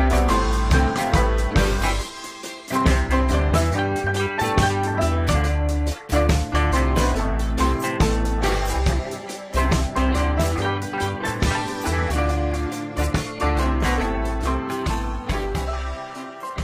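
At 13.45 s an adaptive stream at a lower bitrate takes over until the end. Treble above 14.9 kHz vanishes and the top turns synthetic, consistent with a drop from roughly 96 to 20 kbit/s. The switch is abrupt but gapless, unlike a dropout.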